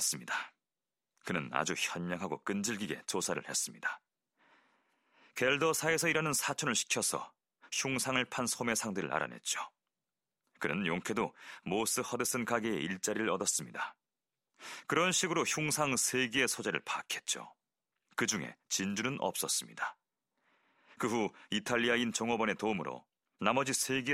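Listening to this speech recording, nothing stood out as a technical fault at any point.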